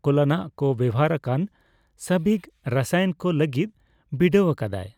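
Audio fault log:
No faults are audible; the speech signal stays clean from its opening moments to its close.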